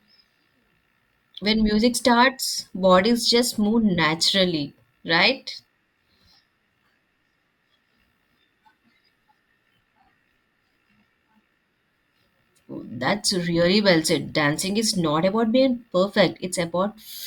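Nothing here trips the ear: the speech runs along from its first moment to its last without a single glitch, dropout or odd sound getting in the way.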